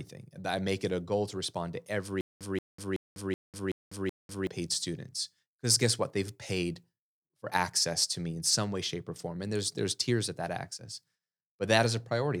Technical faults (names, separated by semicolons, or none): stutter with silent gaps